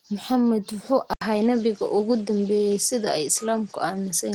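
From the start the speech carries Opus voice compression at 16 kbps in hybrid mode, SILK below 8 kHz with CELT above, leaving it plainly hoarse and slightly robotic. At 1.13 s an 80 ms silence precedes duller sound cut off above 10.5 kHz, with a faint new noise floor, likely an input switched to a poorer device.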